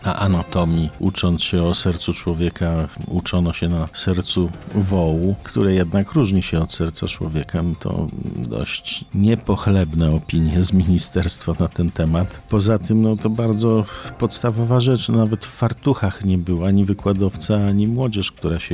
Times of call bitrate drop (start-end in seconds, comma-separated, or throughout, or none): none